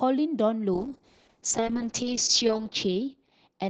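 A call bitrate drop begins at 0.74 s and lasts to the end. The coarser coding points to the Opus encoder being pushed from 32 kbps down to 6 kbps, held at its lowest for 1.5 s, leaving the speech rough, watery and muffled as the high frequencies vanish.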